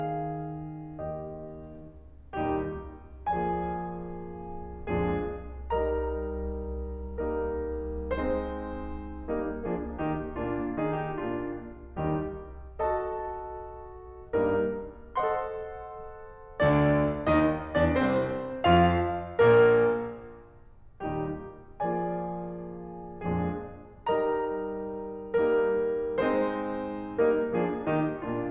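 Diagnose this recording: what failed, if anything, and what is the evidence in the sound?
Listening closely to this music, nothing stood out as a failure at any stage of the chain.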